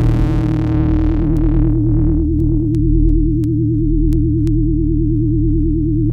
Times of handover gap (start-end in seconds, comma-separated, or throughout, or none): none